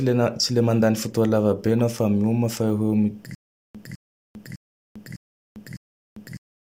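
A speech clip that breaks into a stutter with silent gaps from 3.35 s to the end: a 0.21 s burst repeats five times, every 0.60 s, with 0.40 s of dead digital silence between. That silence separates it from a seamless loop, and the likely cause is a stalled stream replaying its last fragment.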